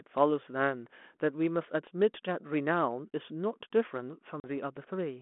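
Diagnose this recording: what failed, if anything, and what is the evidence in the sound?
At 4.4 s the speech drops into a hard-edged silence and comes back at 4.46 s slightly distorted. This is packet loss on an ADPCM call at the network stage. About 40 ms (a couple of packets) vanished, so the G.726 decoder's predictor and step size fell out of step with the sender's.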